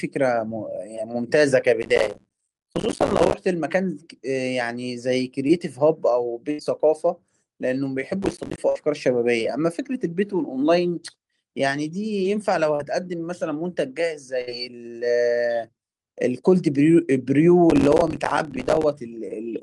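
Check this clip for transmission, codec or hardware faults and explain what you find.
Three kinds of fault appear in this speech clip: processor overload crackle three times, short concealed packet loss twice, and burst packet loss three times.

Processor overload crackle occurs from 1.82 to 3.34 s, 8.23 to 8.58 s and 17.70 to 18.84 s. Each stretch is a gritty, tearing crackle laid over the speech that stops abruptly once the stretch ends. The processor fell behind and missed many buffer deadlines in a row. Each missed buffer became a tiny hard-edged hole of silence, and the spacing of those holes fits buffers of about 5 ms.

Short concealed packet loss occurs from 5.47 to 5.51 s and from 12.75 to 12.81 s. Each is a brief smear or wobble in the speech rather than a clean gap. About 20 ms of audio was missing at the first point and about 40 ms at the second. The receiver covered each hole by extending the preceding sound, following its pitch where it was voiced and using shaped noise where it was not, then blended back into the real signal.

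Burst packet loss occurs at 6.51 to 6.61 s, 8.69 to 8.77 s and 14.41 to 14.49 s. Each sounds like a short held buzz or fading hiss, after which the speech resumes with a piece missing. The gaps were about 80 ms, 64 ms and 57 ms, with about 80 ms, 60 ms and 60 ms of audio missing. The receiver kept stretching the last sound and lowered its level as each gap went on, so what was actually said during those moments is lost.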